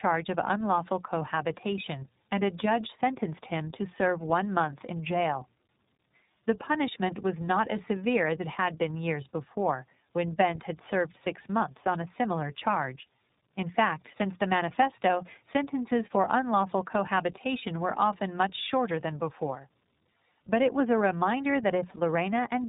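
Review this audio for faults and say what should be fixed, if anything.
The whole clip shows tandem speech coding. The speech sounds rough, muffled and warbly, and nothing reaches above 3.8 kHz. That fits two low-rate speech coders in a row, likely AMR-NB then iLBC joined through a G.711 hop, with the second coder chewing on the first one's artefacts. To prevent it, pass the coded stream through untouched across network borders, or keep a single codec end to end.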